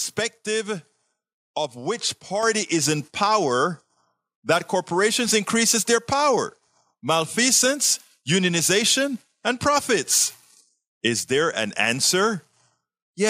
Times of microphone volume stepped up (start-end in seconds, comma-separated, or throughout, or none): 2.43